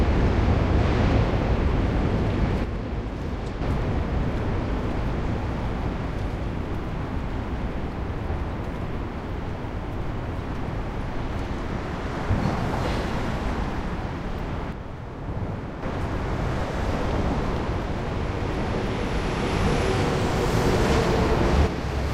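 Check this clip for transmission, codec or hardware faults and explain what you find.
A stereo channel appears to fail three times: from 2.64 to 3.62 s, from 14.72 to 15.83 s, and from 21.67 s to the end at 22.13 s. This is one channel dropping out, likely a lost link or connection on one side. In the mono sum, material shared by both channels falls abruptly by about 6 dB, and anything carried only by the missing side vanishes. The sound dips suddenly, then returns to full level when the channel comes back after the first two; the last dropout runs to the end.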